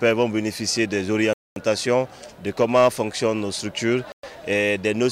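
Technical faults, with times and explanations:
1.33–1.56 s and 4.12–4.23 s, Bluetooth stall: the wireless link likely held up packets, so the headphones' buffer emptied before resent audio arrived. The sound drops to silence for about 0.23 s, then about 0.11 s, and resumes after each gap.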